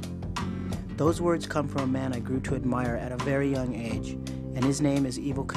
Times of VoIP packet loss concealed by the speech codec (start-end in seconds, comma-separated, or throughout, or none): none